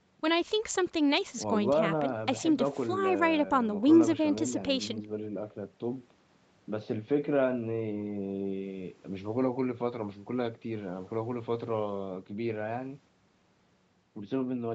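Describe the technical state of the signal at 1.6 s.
At 1.6 s the speech is intact, with no dropout, glitch or distortion, only the ordinary call-path band limit with nothing above about 8 kHz.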